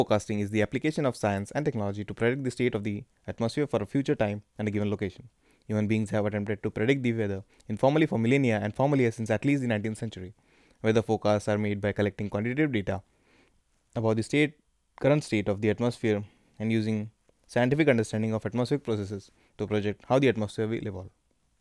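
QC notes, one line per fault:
No faults heard in playback.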